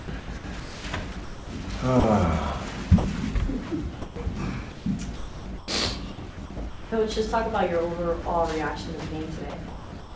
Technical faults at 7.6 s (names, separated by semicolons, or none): none